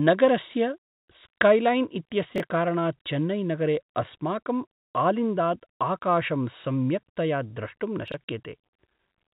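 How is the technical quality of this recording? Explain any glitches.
Two brief glitches disturb the speech, which comes through G.711 telephone coding with nothing above 4 kHz. Chunks out of order occur at 2.36–2.4 s, just before "कारणात् चेन्नैनगरे अस्माकम् आलिन्दात्", and at 8.08–8.14 s. Each time a 20 ms block plays late, by one block and then by two, producing a jumbled blip across the hard joins. Unlike a dropout, no sound is missing; it is only reordered.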